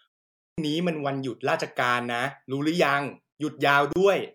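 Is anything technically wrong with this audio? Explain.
Yes, two faults.

Clipped start after a pause at 0.34 s: the output device dozed through the opening 0.34 s of silence and took time to wake, so about 239 ms is swallowed and the speech begins abruptly, missing its first sounds.

Gap at a join of encoded pieces at 3.93 s: separately encoded segments were spliced without trimming encoder delay and padding, leaving a 32 ms hole with smeared edges before the speech resumes where it stopped.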